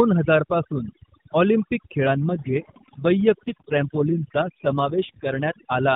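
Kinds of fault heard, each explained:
Overdone noise removal: The background drops and breaks up into twinkling specks. A noise reducer set too strong is cutting frequency bands down or off whenever they sit near its noise estimate, taking quiet speech detail too.
AMR rate drop: From 2.0 s to 5.4 s the speech turns rougher and more synthetic, with no gap or change in bandwidth. The network has pushed the AMR-NB coder down to what sounds like its 5.9 kbps mode, shifting bits to error protection.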